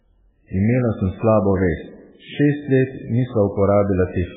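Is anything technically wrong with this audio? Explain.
Yes. MP3 compression damage runs through the whole speech clip and is heavy. Nothing is present above about 3.8 kHz, so the treble is simply missing and the speech sounds dull. What remains has a watery, swirling quality, with sibilants reduced to metallic chirps and consonant onsets smeared. The likely cause is an MP3 encoder starved of bits, cutting off the top band and dropping weak frequency lines so they flicker frame to frame, which fits a bitrate as low as 8 kbps.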